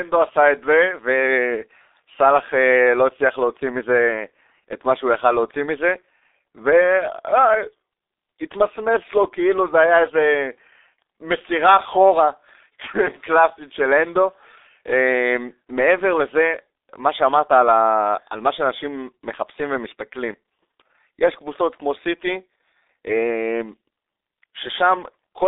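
From start to finish the speech carries G.723.1 codec damage, and it is heavy. Nothing reaches above about 3.8 kHz, inside a telephone-style band of roughly 300 Hz to 3.7 kHz. The result sounds muffled and hoarse, with smeared consonants, which fits a very low bitrate around 6.3 kbit/s. Simple band-limiting would only dull the sound. Here the codec's slow, frame-by-frame voice model also roughens the tone and blurs quick transitions.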